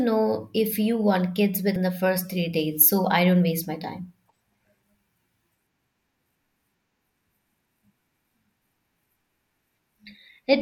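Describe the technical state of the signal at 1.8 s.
At about 1.75 s the speech has compressed frames skipped: roughly two frames, each 21.3 ms long, never reach the output, so the audio jumps ahead by about 40 ms. The speech is heard to jump abruptly at the join.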